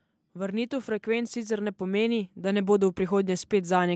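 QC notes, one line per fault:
0.2–3.95 s, automatic gain rising: the speech and the background noise beneath it swell together, growing steadily louder from just after the start through to the end of the clip instead of holding a fixed level. Because both rise as one, this is not the talker getting louder. An automatic gain control judged the input too quiet and kept raising its gain gradually. The sound is band-limited by the call microphone processing, with nothing above 8 kHz.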